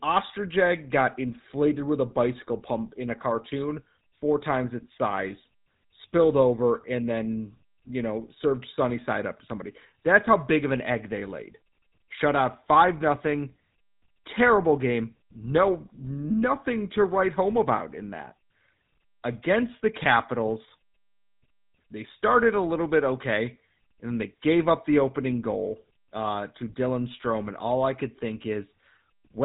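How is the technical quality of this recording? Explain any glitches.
The speech is clearly degraded throughout by GSM full-rate codec damage. The codec rebuilds the voice from a vocal-tract model and sparse, regularly spaced pulses, which fits 13 kbps. That gives a buzzy, gravelly roughness, with nothing above 3.8 kHz.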